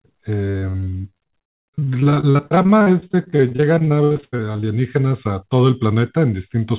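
Repeated packet loss gives this speech a robotic sound from 0.5 to 4.64 s. Dozens of short gaps, the longest 82 ms, are patched by stretching the preceding sound, so about a third of that stretch is concealed and comes out choppy. Nothing is heard above 4 kHz, which fits narrowband G.711 call coding.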